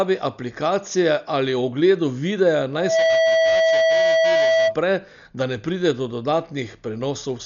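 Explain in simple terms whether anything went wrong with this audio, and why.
Two things went wrong. The speech was likely squeezed through heavy Dolby Digital compression, which throws away fine detail to save space. Nothing above about 6.9 kHz survives, so the voice sounds dull and muffled throughout, with a rough, fluttering grain.

From 2.73 to 4.77 s there is a loudspeaker feedback squeal: a microphone picked up the speaker it was feeding, and the loop ran away at one pitch. A steady 653 Hz tone swells up within about a third of a second and rings louder than the speech.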